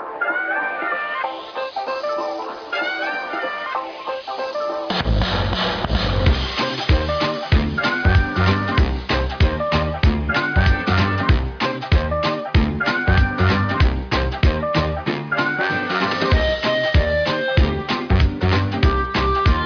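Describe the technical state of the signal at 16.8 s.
The signal at 16.8 s is intact, with no audible fault at that moment.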